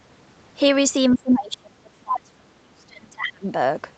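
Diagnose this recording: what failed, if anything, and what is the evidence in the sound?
From 1.15 to 3.5 s the speech drops away in uneven chunks, around two seconds in all, at worst by roughly 30 dB. The waveform envelope shows ragged gaps. This is likely speech suppressed in double talk: the echo canceller confused the talker with loudspeaker echo and attenuated both.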